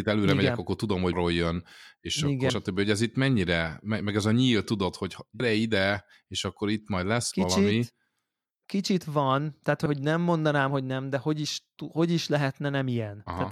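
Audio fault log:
1.12, 2.49, 5.39, 13.26 s: compressed frames skipped. Frames of about 23.2 ms went unplayed, so the speech jumps ahead, roughly 300 ms between "megyek akkor tudom" and "jön és", and about 100 ms at the others, including between "a nyíl tudod hogy" and "ide és akkor itt".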